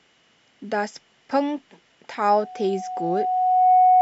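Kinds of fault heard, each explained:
Loudspeaker feedback squeal: the microphone picks up its loudspeaker, and the loop gain exceeds one at 736 Hz. From 2.30 s that single tone swells over about a second and a half to roughly 10 dB above the speech, unlike a hum, which starts at full level.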